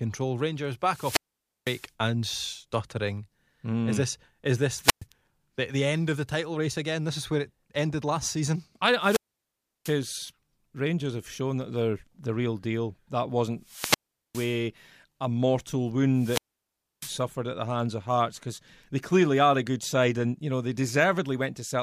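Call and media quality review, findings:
Wireless microphone squelch dropout, five events. The analogue FM mic's RF signal fades below the receiver squelch threshold, so the output gates off. Heard as a hiss swell, then a near-silent hole before the speech resumes.

0.85–1.90 s, mute 0.50 s. 4.81–5.05 s, mute 0.12 s, between "this is this" and "the the end of". 8.99–9.98 s, mute 0.69 s, after "ended last season I". 13.62–14.62 s, mute 0.41 s, before "a mortal". 16.15–17.23 s, mute 0.65 s.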